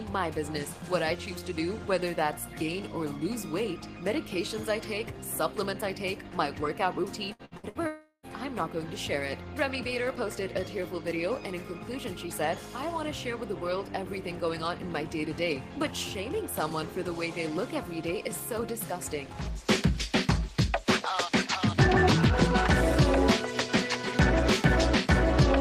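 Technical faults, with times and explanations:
7.33 to 7.78 s, repeated packet loss (robotic sound): four short holes open up in under half a second, the longest about 61 ms, and roughly half of that stretch is patched rather than real. Each gap gets filled by stretching out whatever came just before it, so you hear choppy fragments with bits missing.
7.87 to 8.26 s, long network dropout, likely cause: about 360 ms of audio never arrives. The receiver keeps extending the last sound it had, so you get a buzzy smear that fades, and for the last 100 ms or so there's just silence. When the audio picks back up it jumps ahead, and whatever fell in that gap is simply gone.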